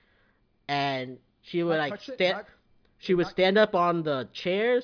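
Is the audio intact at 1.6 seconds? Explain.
Yes, the speech at 1.6 seconds is intact, with no audible fault at that moment.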